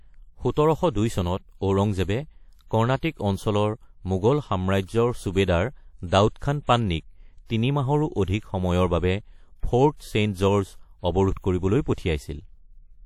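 WMA compression runs throughout the speech, with plainly audible damage, likely from a low-bitrate WMA encode, which fits around 48 kbps. Long transform blocks smear quantisation noise over tens of milliseconds, leaving a ringing, washy hiss that breathes with the signal, and nothing above 17.6 kHz.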